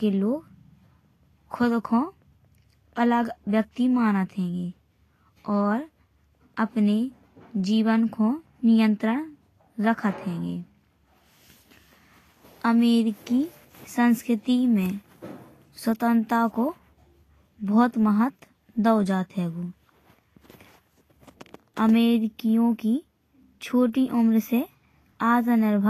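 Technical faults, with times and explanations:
Throughout, Vorbis compression: the speech sounds hissy and grainy, with roughened tones and blurred consonant attacks. The likely cause is low-quality Vorbis coding, which fits a bitrate around 34 kbps. A spectrogram shows nothing above 14.2 kHz and mottled, noisy treble where fine detail should be.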